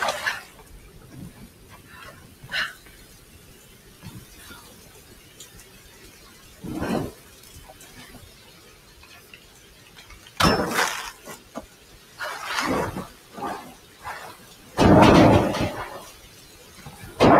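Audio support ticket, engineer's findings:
Noise suppressor applied to music or sounds, tuned for speech, active across the whole clip. It treats sustained tones, ambience and reverb as noise and pulls them down by roughly 15 dB. Attacks pass, held parts and tails sink, so the sound pumps and thins.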